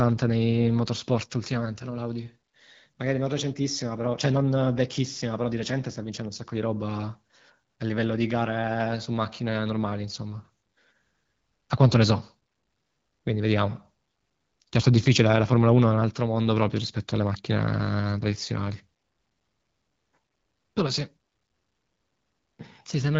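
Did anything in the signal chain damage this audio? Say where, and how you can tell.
No, nothing in the chain damaged this speech; the AMR wideband (HD Voice) codec at 12.65 kbit/s keeps it clear, with only the light coding texture expected at that rate.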